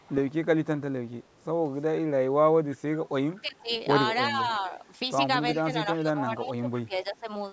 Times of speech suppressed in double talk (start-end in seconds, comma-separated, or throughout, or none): 3.42-3.70, 4.28-4.72, 5.64-7.27